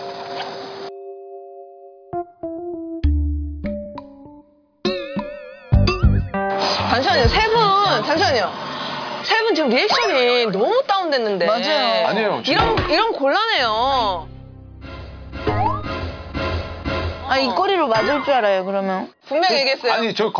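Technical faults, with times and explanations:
Nothing technical stands out here; the sound carries on without any trouble you'd notice by ear.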